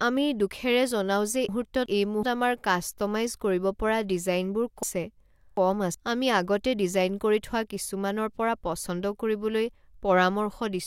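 At 1.49–2.23 s, after "আমি দুখেৰে জনাও যে", and 4.83–5.94 s, before "আমি আগতে ডিজাইন কৰি", chunks out of order: 0.37 s speech blocks play one and two chunks late, giving jumbled joins.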